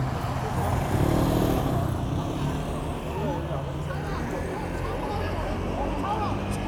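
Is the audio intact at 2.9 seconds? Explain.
Yes, the sound at 2.9 seconds plays through intact, with no fault at that point.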